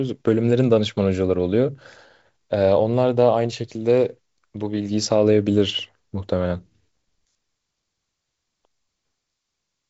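No faults here: the speech carries the faint upper-band hiss and the ceiling near 7.7 kHz that fit G.722 wideband telephone coding at 56 kbit/s, which is working normally.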